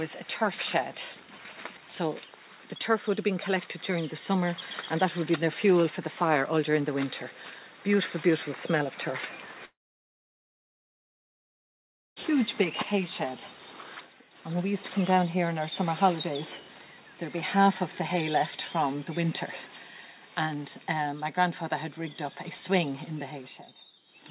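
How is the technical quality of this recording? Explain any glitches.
The recording has one clear glitch, a gap of about two and a half seconds, heard through a call-style path that cuts everything above 4 kHz, which fits a G.711 telephone codec.

From 9.65 to 12.19 s, the sound smears into a brief fading buzz or hiss, then drops to near silence for about 2.4 s before resuming with that stretch missing. This is likely a long network dropout: the receiver briefly extended the last audio, then gave up.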